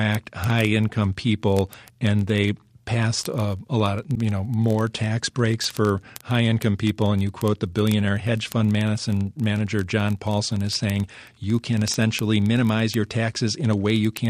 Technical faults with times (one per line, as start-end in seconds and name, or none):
0.11-14.29 word clock ticks
4.14-4.17 broken MP3 bit reservoir